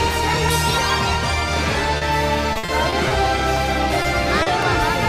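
A sharp single click at 0.49 s, with more at 1.54 s, 3.57 s and 4.63 s, marks dropped samples. Each is an abrupt vertical tick with no lost sound around it, most likely because a fraction of a millisecond of samples went missing, so the waveform leaps from one value straight to a later one and the discontinuity is heard as a click.

Between 1.97 and 2.03 s the sound briefly smears, a short concealed packet loss. About 40 ms of audio never arrived, and the receiver bridged the hole by extending the preceding sound before blending back into the real signal.

From 2.53 to 3.12 s the audio turns choppy: repeated packet loss producing robotic sound. Five separate gaps fall within this stretch, the longest 60 ms, adding up to about 140 ms missing. Each is patched by continuing the last sound, and the next gap follows before the audio settles, so roughly a quarter of the stretch is synthetic fill, giving the mechanical, broken texture.

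The same brief smear returns twice as short concealed packet loss: a 20 ms fill from 4.02 to 4.06 s, then a 40 ms fill from 4.42 to 4.48 s. Each is a short wobble where missing audio was replaced by a continuation of what came just before.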